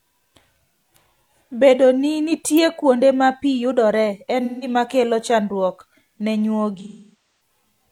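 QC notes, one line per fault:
2.57 s, electrical switching spike. A sharp snap sits on top of the speech for about 5 ms. It is far too short and abrupt to come from the talker or the room. A nearby switch, motor or static discharge likely arced, and the audio line picked up that burst as a click added over the signal.
4.44–4.68 s and 6.79–7.15 s, AAC frame loss with concealment. At the first range, about 171 ms of audio drops out, which fits a few lost frames. The decoder rebuilds that gap from the last good spectrum, so the speech turns smeared and noisy with a phasey tinge. The second range is worse. About 555 ms is missing, scattered over roughly 680 ms, with the longest gap near 0.4 s. There the concealment runs out of good data, so the sound decays toward silence and then fades back in.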